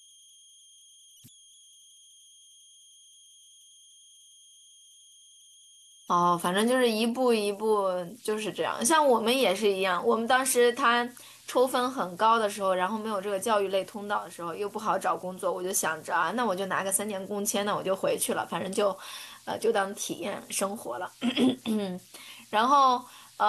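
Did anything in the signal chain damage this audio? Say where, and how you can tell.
Yes, the damage is at the converter. All the way through the clip there's a faint whistle around 3 kHz, clearest in the pauses between phrases, with a grainy texture riding under the quieter speech, sitting about 30 dB below the signal. That's converter idle tones: a delta-sigma converter running without dither gets stuck cycling through repeating bit patterns when the input is small, and those cycles come out as a tone rather than smooth noise.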